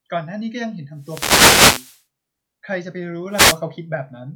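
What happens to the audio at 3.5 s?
A wireless microphone noise hit runs from about 3.30 to 3.61 s, roughly a third of a second around the 3.5 s mark. The analogue FM radio link from the microphone fades briefly as reflected copies of the signal cancel the direct one at the receiver, so the receiver's own noise floor rises and breaks through. It sounds like a short swish or burst of static laid over the speech.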